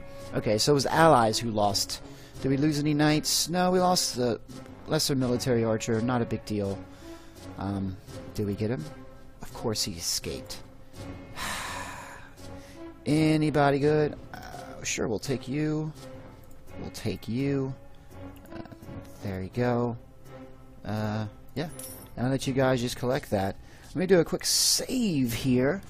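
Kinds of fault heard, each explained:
No technical faults are audible.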